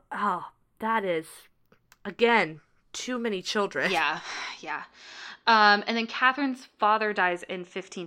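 The two channels were captured on devices running from separate clocks that disagree by a few tens of parts per million, so the channels are drifting apart throughout the speech. The offset between left and right grows steadily, reaching about a tenth of a millisecond by the end. When the channels are summed to mono, comb-filter notches sweep slowly across the spectrum, heard as a gradual flanging or hollow swirl.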